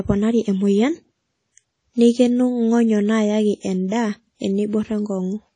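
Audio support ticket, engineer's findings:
Speech throughout. Ringing, washy texture. Hiss that swells and fades with the signal. No content above 10 kHz. Damage plainly audible. Likely cause: WMA compression, with long transform blocks smearing quantisation noise over tens of milliseconds. Weak spectral lines dropped to zero. Sound fits a low bitrate, around 32 kbps.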